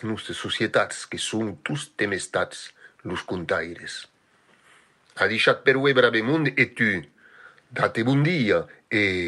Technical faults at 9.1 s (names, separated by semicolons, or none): none